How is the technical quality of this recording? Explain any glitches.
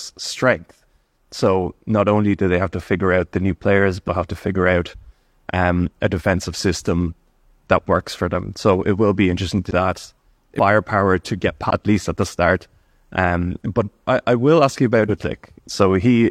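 The speech jumps forward five times, at about 4.04, 9.66, 10.55, 11.66 and 15.05 s. These are compressed frames skipped: runs of roughly ten to fifteen coded frames, consistent with a frame length of about 46 ms, never reach the output. Roughly 0.4, 0.7, 0.7, 0.5 and 0.7 s of speech simply vanish.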